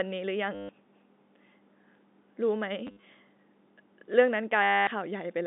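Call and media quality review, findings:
Packet loss with last packet repeated, 0.55–0.69 s, 2.87–3.03 s (scattered, longest gap 60 ms), 4.63–4.87 s. Jitter buffer or concealment replays the last packet, and each run gives a robotic 100 Hz buzz, fitting 10 ms packets. G.711 band limit 200 Hz–3.7 kHz audible.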